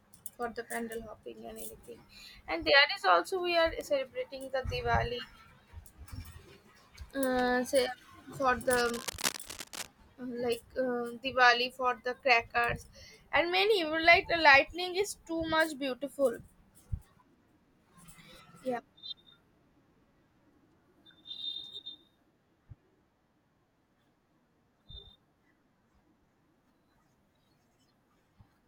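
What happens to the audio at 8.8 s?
Cable scratch noise runs from 8.68 to 9.88 s: dense, uneven rustling bursts about 10 dB below the speech, likely from a worn connector shifting. Spectrogram shows ragged broadband smears.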